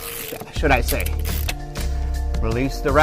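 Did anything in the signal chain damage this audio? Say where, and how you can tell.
Yes. At 1.47 s the sound jumps abruptly ahead with a small blip, as if a piece of the programme vanished. That's likely a stream segment skipped, a network-stage fault: one segment failed to load and the player just moved on to the next.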